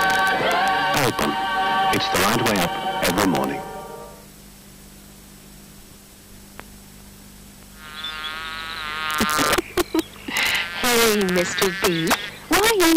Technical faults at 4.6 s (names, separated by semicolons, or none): none